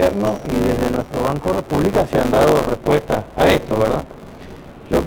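The audio carries buffer tearing from start to finish: a steady robotic buzz at 100 Hz, suggesting a 10 ms period, that's there whenever sound is. The writer and reader have slipped, so most of each period replays audio about 20 ms old, hard-spliced at both edges.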